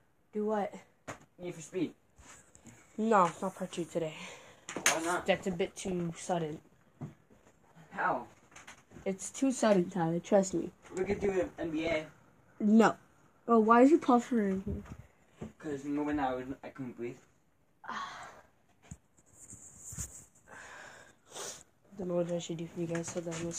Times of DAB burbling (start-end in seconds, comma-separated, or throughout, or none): 1.43-2.38, 5.23-6.12, 11.04-12.02, 14.84-15.00, 18.01-18.49, 21.55-22.04